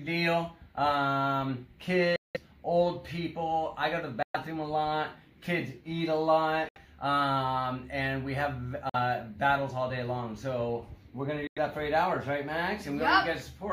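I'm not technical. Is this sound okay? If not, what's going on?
No. Bluetooth dropouts cut the sound to silence at 2.16, 4.23, 6.69, 8.89 and 11.47 s, each gap lasting about 0.05 to 0.2 seconds. The likely cause is audio packets reaching the headphones too late, so the sound vanishes abruptly and returns further along.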